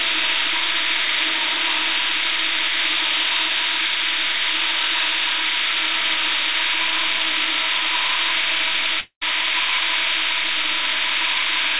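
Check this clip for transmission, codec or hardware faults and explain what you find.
There is one clear fault: a long network dropout from 9.0 to 9.23 s. The sound turns into a fading buzz, then briefly goes silent. Lost packets are the likely cause. About 0.22 s is skipped before playback resumes.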